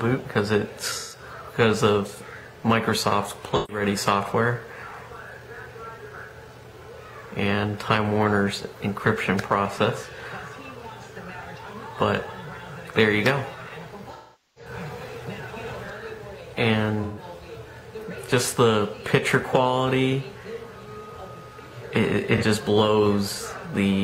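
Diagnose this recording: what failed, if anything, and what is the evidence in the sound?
Codec stage: AAC frame loss with concealment. Smeared, phasey patches at 0.99, 3.55, 17.03 and 22.37 s, plus a longer stretch at 14.13–14.71 s that decays toward silence and fades back. The decoder rebuilds the missing frames from the last good spectrum, so unlike a plain dropout, the gaps fill with blurred sound rather than hard silence.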